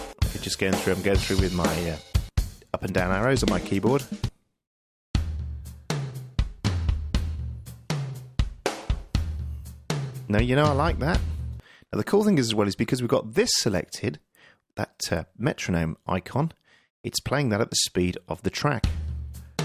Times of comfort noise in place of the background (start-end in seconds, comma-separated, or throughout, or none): none